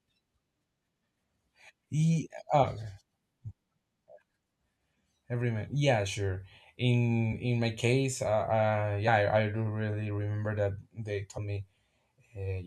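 Compressed frames skipped at 2.62, 7.32, 9.07 and 11.37 s: the decoder drops whole frames, so the speech jumps ahead by roughly 70, 20, 40 and 70 ms. The skips fit a frame of about 21 ms.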